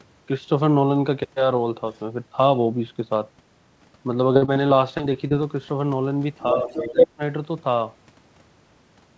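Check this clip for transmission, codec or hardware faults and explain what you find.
Three kinds of fault are audible: far-end echo leaking into the signal twice, a burst of repeated packet loss, and suppression of the talker during double talk. The call path carries the usual wideband codec character, with nothing above 8 kHz, which fits G.722 at 64 kbps.

Other side's voice leaking through, 1.95 to 1.99 s and 6.40 to 7.08 s: the first is a very faint 40 ms scrap, far below the talker. The second is much stronger, roughly as loud as the talker for about 0.7 s. The likely cause is residual acoustic echo: the loudspeaker's output reached the microphone and the echo canceller left part of it in place. The leaked sound comes through as a second, overlapping voice layer.

Repeated packet loss (robotic sound), 4.34 to 5.32 s: across this second the audio breaks up into a run of short holes, about 180 ms missing in total, none longer than 44 ms. 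The receiver patched them by extending the preceding sound, so about 17% of the span is synthesized fill. Because gaps follow one another closely, the result is choppy, with pieces missing.

Speech suppressed in double talk, 6.53 to 7.22 s: this overlaps the strong echo leak, so both sides were active at once. The likely cause is the echo canceller failing to separate the talker from the loudspeaker pickup and attenuating everything. The talker's level drops by as much as about 15 dB, in pieces adding up to roughly 0.4 s, so the voice dips and partly cuts out.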